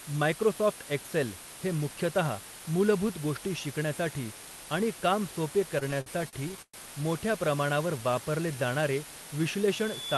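Speech over a call path with Opus-style coding and a top end near 12 kHz. A steady, even hiss runs through the whole clip, well up, roughly 15 dB under the speech. It is low bit depth with dither, likely around 5 bits, with no distortion. From 5.79 to 6.76 s the audio drags in repeated stalls (stutter). There are ten brief holds, the longest 118 ms, bridged by stretching the last sound. Nothing is lost. From 9.73 s to the end, a loudspeaker feedback squeal at 3.5 kHz swells over under a second, finishing about 10 dB above the speech.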